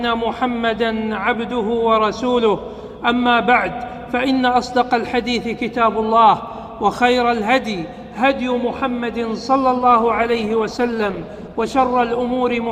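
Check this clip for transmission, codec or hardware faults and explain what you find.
One fault is present: a temporary drop in stream quality near the end. An adaptive stream at a lower bitrate runs from 9.78 to 11.78 s. For those 2 s the player switched to a leaner encoding of the same audio, as a stream does when the connection slows, and the sound points to a fall from roughly 64 kbit/s to 16 kbit/s Opus. Codec artefacts rise, and the change in quality is abrupt both ways, with no gap.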